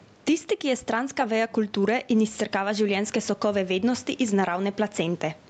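Gain pumping runs through the whole speech clip: the room noise sits about 38 dB below the talker, and the level swings by around 10 dB. The likely cause is input gain set far too high, with a fast limiter or compressor clamping down on every peak. Loud and quiet passages are pressed close together, leaving the speech squashed over an audio band that stops at 8 kHz.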